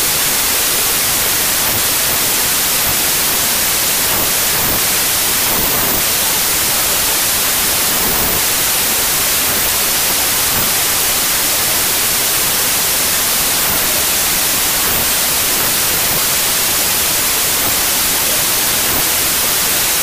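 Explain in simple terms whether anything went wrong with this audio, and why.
Wrong sample width, throughout: sound stored as 24-bit numbers was read as 32-bit ones, giving loud noise that runs 1.33 times too fast and high.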